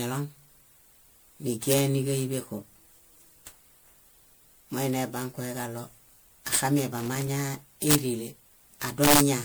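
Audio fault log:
Throughout: generation loss. The sound is swirly, smeared and hollow, and consonant attacks blur. The cause is likely repeated MP3 coding at 128 kbit/s, perhaps seven passes. Each pass quantises again on a shifted frame grid. The noise and spectral gaps from every pass pile up. Content still reaches about 20.9 kHz, so the damage is not a simple low bandwidth. It comes from the stacked losses.
1.72–1.78 s, 6.55 s, 7.91–7.95 s, 9.04–9.20 s: integer overflow. Each event is a sharp, violent crack on a loud peak. The peaks go past full scale by about 2 dB at 1.72 s and 9.04 s, and by about 4 dB at 6.55 s and 7.91 s. The excess does not clip. It wraps to the opposite sign and jumps across the whole range. That is why these cracks sound far harsher than clipping.
6.98–7.40 s: loose connector crackle. An irregular burst of scratchy crackle lasts about 0.4 s. A worn or dirty contact is rapidly making and breaking. 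Every break chops the signal. The pattern is uneven because the contact moves at random.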